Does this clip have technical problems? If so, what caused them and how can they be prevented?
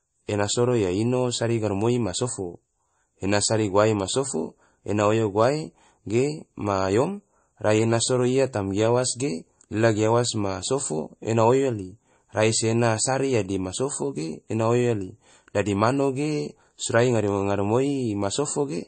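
Yes. Throughout, the speech sounds watery and swirly, with nothing above 8.4 kHz. The likely cause is MP3 compression starved of bits, which fits about 32 kbps, so the encoder discarded treble and weak detail. Encoding at a higher bitrate would prevent it.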